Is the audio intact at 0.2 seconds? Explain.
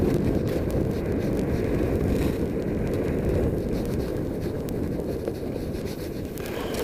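No, 0.2 s sits inside word clock ticks running from 0.10 s to the end: an unlocked receiver clock slips a sample roughly every 20 ms, giving a steady, sharp ticking.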